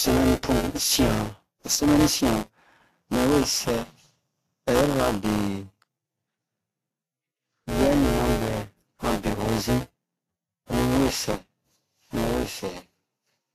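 Speech runs for the whole clip with a robotic buzz at 188 Hz. That rate fits a 256-sample buffer, and it means buffer tearing. Roughly a sixth of each period replays audio from about 10 ms earlier, joined hard on both sides. Unlike random dropouts or clicks, the rattle is steady and stops whenever the speech pauses. The high-bitrate MP3 also has nothing above 14.2 kHz and carries smeared, watery codec artefacts. This is likely low-bitrate audio saved at a high bitrate. A genuine high-bitrate encode would keep that top band, so the damage points to an earlier low-bitrate encoding that re-encoding could not undo.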